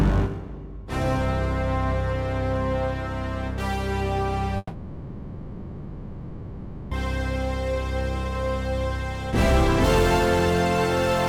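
From 4.57 s to 6.94 s the audio breaks off in a long network dropout: about 2.34 s of material is simply gone. In its place the receiver stretches the last received sound into a buzzy, hissy continuation that fades. At 6.94 s the audio resumes, later in the programme, with the gap never recovered. The likely cause is a stall in packet delivery.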